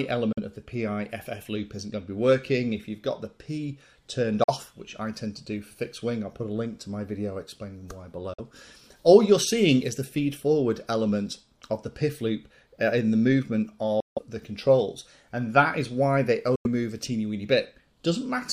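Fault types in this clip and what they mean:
Bluetooth dropout: Sound drops to silence at 0.33, 4.44, 8.34, 14.00 and 16.56 s. Three gaps last 46 ms; the last two run 163 and 93 ms. Playback resumes further on, as if it kept going. Late, discarded wireless packets are the likely cause.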